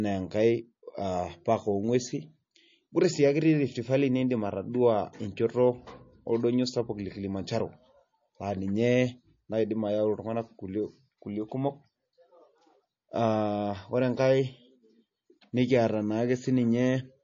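From start to end, the speech carries plainly audible damage, likely from MP3 compression. Nothing sounds above 7.2 kHz, so the top of the sound is cut off sharply. The encoder seems starved of bits, which fits a low bitrate near 32 kbps. It drops the treble and discards weaker frequency detail. That detail flickers in and out between frames. The result is a watery, swirly quality, and sharp sounds lose their edge.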